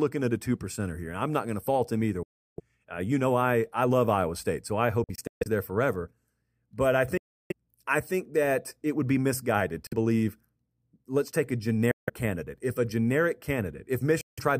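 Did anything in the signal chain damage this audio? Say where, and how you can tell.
Yes. The speech cuts to silence six times with abrupt or briefly faded edges, then resumes further along, as if it had kept playing during the gap. The gaps fall at 2.23–2.60 s, 5.04–5.48 s (broken into several short holes), 7.18–7.52 s just before "I think that it", 9.87–9.93 s after "it would be misguided", 11.91–12.10 s after "let's take a", and 14.21–14.39 s. This is likely a Bluetooth dropout on the wireless link. Packets arrived too late and were discarded, so the timeline skipped ahead instead of stalling.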